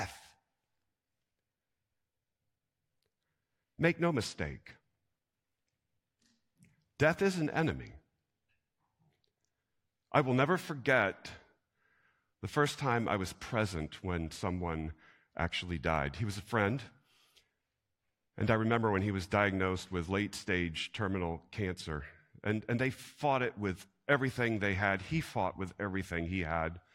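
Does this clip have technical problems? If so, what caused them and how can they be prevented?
No, nothing in this recording needs fixing or preventing.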